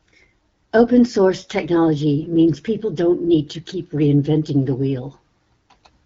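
From 2.20 to 2.34 s, AMR bit errors corrupt several frames' less protected bits, roughly a few percent, misplacing excitation pulses so the speech turns briefly scratchy and gargly.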